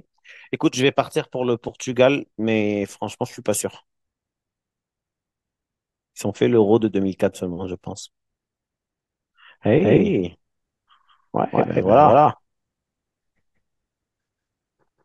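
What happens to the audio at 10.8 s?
At 10.8 s the sound is inside a doubled audio track that begins abruptly at 9.82 s and runs to the end: a second full-band copy, at roughly equal level, trails about 200 ms behind with no decay, likely from the audio being captured twice through a slower path.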